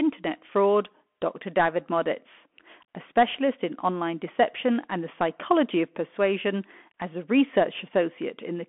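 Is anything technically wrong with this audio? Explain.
Yes. The speech runs through a Bluetooth CVSD headset codec for the whole clip. CVSD sends one bit per sample at 64 kHz, each saying only up or down, with an adapting step size. The line band here is about 250 Hz to 3.4 kHz, and nothing passes above 3.8 kHz. The result is narrow, telephone-like speech with plainly audible codec damage: loud high sounds outrun the step and distort, s sounds turn scratchy, and a granular hiss sits under the voice.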